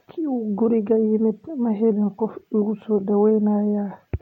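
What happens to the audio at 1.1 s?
At 1.1 s the speech is inside a drift correction step running from 0.66 to 1.91 s. The playback rate jumps by about 5.6%, raising speed and pitch together by roughly 95 cents, nearly a semitone, before snapping back, likely from clock-matching software adjusting its buffer.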